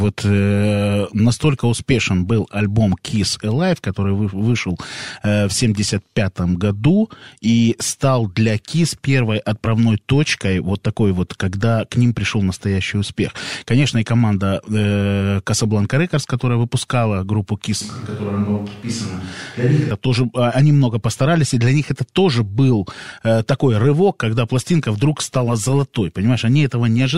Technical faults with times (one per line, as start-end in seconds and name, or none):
17.81-19.91 switch to a distant microphone